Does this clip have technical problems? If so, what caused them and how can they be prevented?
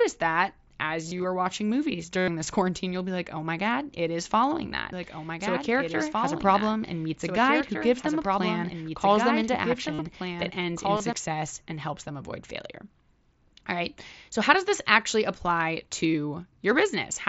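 Yes. Concealed Bluetooth headset packet loss occurs at 1.06 to 1.24 s (scattered short losses), 2.18 to 2.28 s, 4.69 to 4.72 s, 9.93 to 9.99 s and 10.97 to 11.00 s. The receiver fills each gap by repeating recent waveform, so single losses are nearly hidden and longer runs sound like a buzzy held tone, not silence. Keeping the phone close, with a clear line to the headset and away from Wi-Fi congestion, prevents it.

A doubled audio track runs from 4.93 to 11.13 s: a second copy about 5 dB quieter trails roughly two seconds behind. It is likely from a second, slower capture path. Unlike echo, it has no decay or room colour and starts and stops abruptly. Recording from a single input path prevents it.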